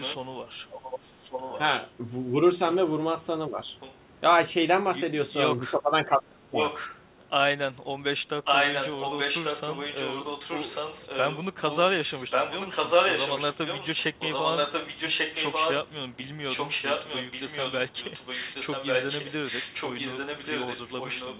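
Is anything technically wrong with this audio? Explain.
Yes, two faults recur in this speech clip.

Echo leak runs from 0.0 to 1.91 s, 3.8 to 3.95 s, 6.57 to 7.24 s, and 8.44 s to the end. The likely cause is a far-end loudspeaker whose echo canceller let some pickup through. A copy of the speech returns about 1.14 s late, roughly 10 dB down at first, faint at 3.8 s, and only about 5 dB below from 6.57 s on.

Speech suppressed in double talk occurs at 2.29 to 2.36 s, 3.48 to 3.6 s, and 5.71 to 6.61 s. With both sides talking, the canceller likely turned the near talker down too. The dips deepen from about 5 dB, to about 10 dB, to roughly 25 dB at their deepest in the last stretch.

Nothing above 4 kHz comes through the call path, which fits a G.711 mu-law link at 64 kbps.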